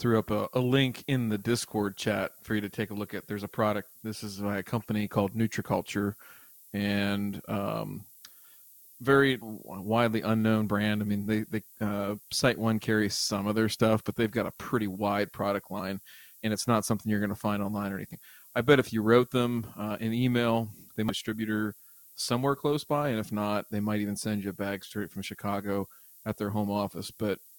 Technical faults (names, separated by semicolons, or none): low bit depth with noise shaping; damaged data in a compressed stream